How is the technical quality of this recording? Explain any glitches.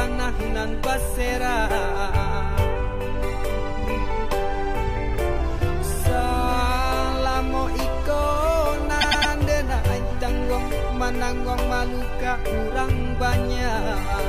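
There is one glitch, repeated frames, from 9.00 to 9.31 s. A 104.5 ms block of compressed audio was written or sent more than once, so the decoder played it three extra times. This adds 313.5 ms and is heard as a rapid stutter.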